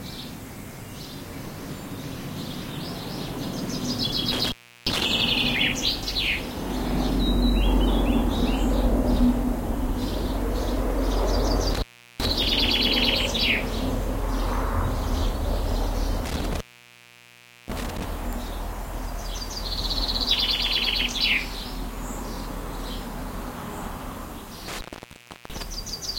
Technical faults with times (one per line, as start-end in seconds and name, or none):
4.32-5.05 intermittent contact
11.74-12.27 intermittent contact
16.24-18.04 intermittent contact
24.68-25.62 intermittent contact